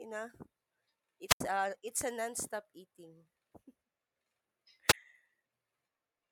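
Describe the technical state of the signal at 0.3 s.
At 0.3 s the speech signal is intact, with no audible dropout, distortion, or other technical fault at that moment.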